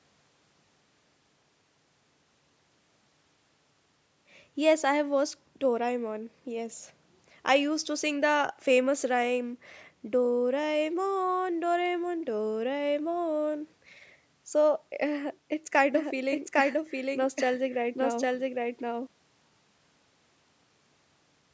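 From 15.95 s to 19.07 s the speech has a doubled audio track: a second, full-band copy trails the original by roughly 0.7 s at about the same level, so each phrase is immediately restated over the next. The copy carries no decay or room colour, and it cuts in and out abruptly at the segment's edges. This is likely the signal being captured twice through a slower path, or an edit leaving two misaligned copies. Both copies share the call microphone processing's band limit, with nothing above 8 kHz.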